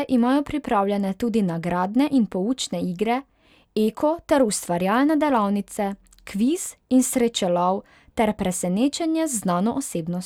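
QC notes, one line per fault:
Nothing to log: the speech track shows no faults.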